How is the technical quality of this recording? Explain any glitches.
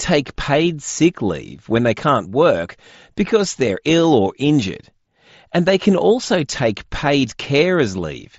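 The technical quality of this recording holds up, with no glitches to explain.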